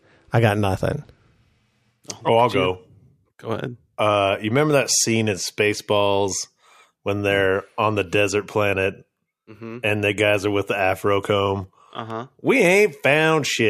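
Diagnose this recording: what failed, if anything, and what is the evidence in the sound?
Nothing in the chain has failed: the speech signal arrives intact and continuous, with no breaks, distortion, level jumps or timing disturbances anywhere in the recording.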